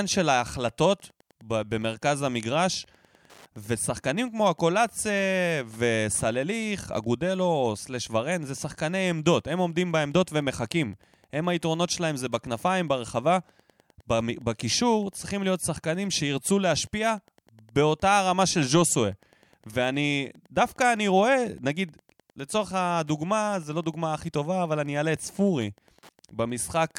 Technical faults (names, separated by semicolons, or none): Wi-Fi interference